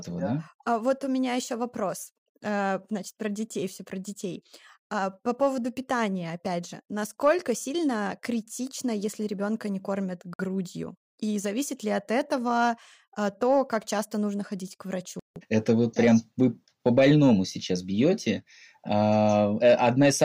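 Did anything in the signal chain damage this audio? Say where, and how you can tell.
Yes. A likely Bluetooth stall on the wireless link starved the headphone buffer, dropping the speech to silence at 10.34–10.39 s and 15.19–15.36 s before it resumed.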